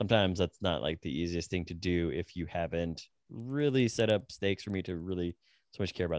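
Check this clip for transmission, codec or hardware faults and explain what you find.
One fault is present. From 3.4 s, just after "do if you haven't", to the end, a steady ticking at 10 per second rides on the speech. It's a resampler restarted on every block: converting 48 kHz to 16 kHz in separate 100 ms chunks leaves an error at each block edge, where the neighbouring samples were missing.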